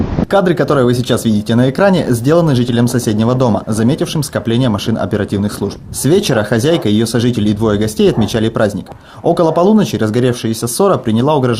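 No technical fault can be heard anywhere in the signal; the audio runs continuously and steadily without any audible disruption or degradation.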